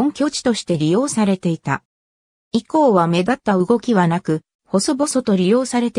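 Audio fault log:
1.29–3.32 s sample clock jitter: the converter clock wavers by under a microsecond, mistiming samples and adding faint hiss, roughly 55 dB below the signal, strongest on steep waveforms.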